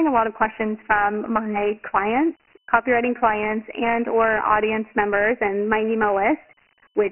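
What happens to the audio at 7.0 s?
At 7.0 s the speech still carries Dialogic VOX ADPCM, present throughout. Each sample becomes a coarse 4-bit step guess, and nothing reaches above 2.9 kHz, which fits a 6,000-sample-per-second stream. Unlike plain telephone band-limiting, a gritty hiss clings to the speech itself.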